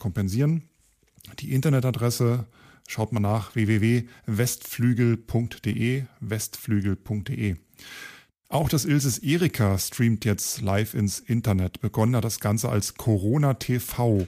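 A dropped buffer (overrun) occurs at 5.73 s in the speech: a brief skip where the sound jumps forward with no gap. The likely cause is that a few milliseconds of samples were overwritten before being read, so the surrounding audio butts directly together.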